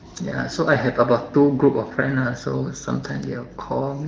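Nothing goes wrong anywhere in this speech; it simply carries the light coding wear you'd expect from an AMR wideband (HD Voice) call running at 15.85 kbit/s.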